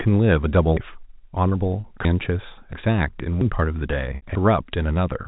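Speech over what sounds like a telephone-band line, with everything above 4 kHz gone and a faint noise that follows the level, which fits G.711 mu-law. It has two kinds of trouble. The clip jumps abruptly at 0.77, 2.05, 2.73, 3.41 and 4.35 s. Each jump is a sudden skip forward with no gap of silence. That points to a dropped buffer (overrun), where the software likely didn't read the input in time and fresh samples overwrote the old ones, so the two sides are spliced together. The first two skips lose roughly a third of a second each. The later ones lose a tenth to about a sixth of a second. Between 4.16 and 4.22 s there's also packet loss with pitch repetition. For about 60 ms the receiver loops the last pitch period to cover the gap, fading it out, which fits three 20 ms packets going missing.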